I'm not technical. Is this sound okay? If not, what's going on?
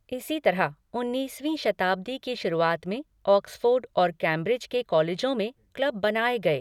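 Yes, nothing is wrong.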